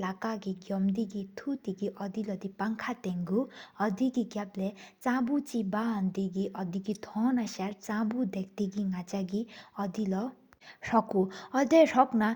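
No technical faults are audible.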